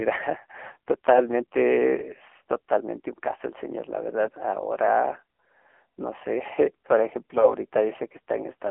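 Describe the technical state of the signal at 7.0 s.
At 7.0 s the speech carries AMR narrowband mobile codec damage, present throughout the clip. Nothing passes above 3.6 kHz. A sparse pulse-driven vocal model rebuilds the voice. The heavy buzzy, synthetic texture points to a low rate near 6.7 kbps.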